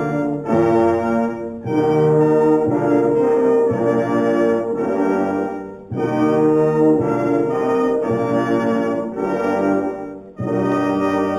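Imaging from linear upsampling runs throughout. The rate was raised from 8 kHz to 44.1 kHz by straight-line interpolation, a weak filter. The top of the band is dulled, and a mirrored image between 4 and 8 kHz, about 35 dB down, adds faint metallic shimmer.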